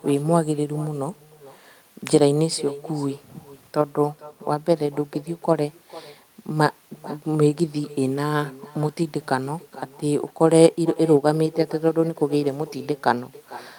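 From start to finish, every phrase is trailed about half a second later by a faint, thin copy of itself, sitting about 19 dB below the direct speech. This is echo with no canceller: the far end is playing the call through a loudspeaker, its microphone picks that playback up, and nothing strips it out, so the talker's own voice returns after the network round trip.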